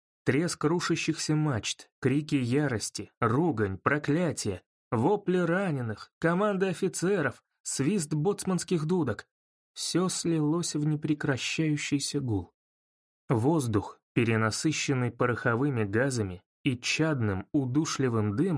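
Nothing in the audio stands out as a technical fault; it runs along without a hitch from the first moment to the last.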